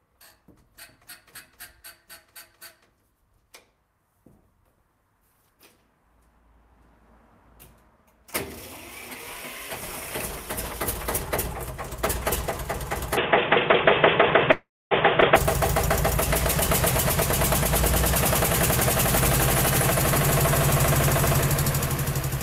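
Input switched to a poorer device, from 13.17 to 15.36 s: the sound abruptly turns dull and boxy, with nothing above 3.6 kHz, a level shift of roughly 5 dB and new background noise about 30 dB below the signal, likely from capture moving to a narrower-band microphone or headset profile.

Call audio freeze, from 14.51 to 14.93 s: the last sound is stretched into a fading buzz lasting about 0.4 s, the final 250 ms of it silent, likely because delayed packets left the jitter buffer empty. When playback resumes, nothing is lost, but everything up to the skip runs about 0.4 s late.

Skip ahead, from 15.21 to 15.24 s: roughly 150 ms of audio is dropped, either discarded in transit or by an overfull jitter buffer while later audio was already queued. Playback jumps forward, and a 9 ms fill joins the two sides almost seamlessly.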